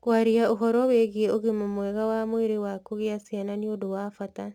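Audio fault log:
Throughout: crude rate conversion. A gritty, inharmonic fizz rides on the speech and is strongest on loud and bright sounds. It points to samples simply being repeated, which fits an unfiltered 44.1 kHz to 48 kHz change. The error sits roughly 35 dB below the speech.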